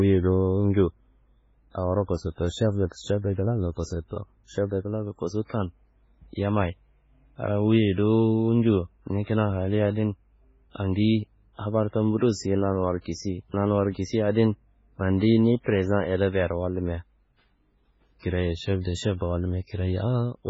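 The recording is speech, and across its full length the top end stops dead at about 7.6 kHz, with a watery, swirling texture on the voice, chirpy metallic edges on sibilants and softened consonant attacks. The likely cause is heavy MP3 compression: starved of bits, the encoder has discarded everything above a fixed cutoff and zeroed weaker spectral lines that flicker between frames, which fits a very low bitrate around 16 kbps.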